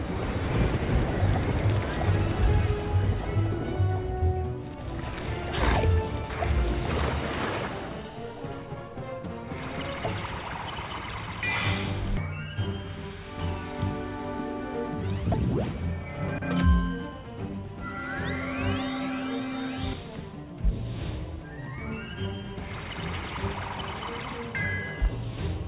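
No technical problem can be heard anywhere in this audio. It has passed through a WebRTC call path, and the lack of any content above 4 kHz points to a narrowband telephone codec such as G.711 A-law.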